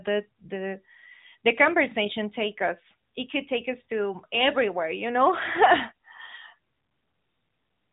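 No technical faults can be heard in the audio.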